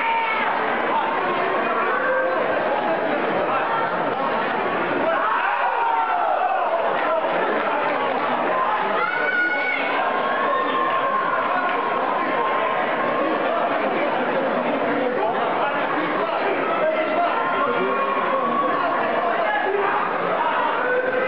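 At 4.51 s, 14.05 s and 17.65 s there are brief bursts of damaged data in a compressed stream. Corrupted bytes make the decoder misread those frames and lose sync until the next valid header, so each spot sounds like a short chirp or blip cutting through the audio.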